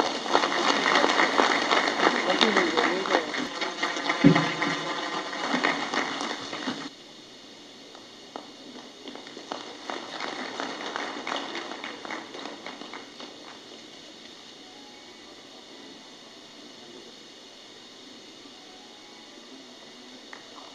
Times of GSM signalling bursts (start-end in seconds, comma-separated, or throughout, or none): none